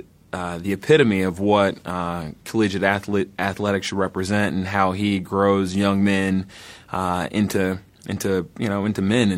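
No technical faults can be heard anywhere in the recording, so the speech signal arrives intact with nothing to report.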